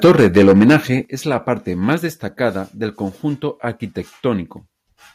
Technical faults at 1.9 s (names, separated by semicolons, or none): microphone overload